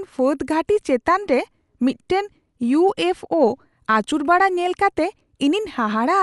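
A speech recording with codec damage plainly audible from start to finish: nothing is left above about 11.4 kHz, so it sounds dull, and a rough, fluttering noise clings around the tonal parts of the voice. This is likely Dolby Digital compression at a starved rate, fitting something near 64 kbps, where uncoded frequency lines are filled with dither noise. That noise fill sets it apart from MP3-style swirling, which leaves holes rather than hiss.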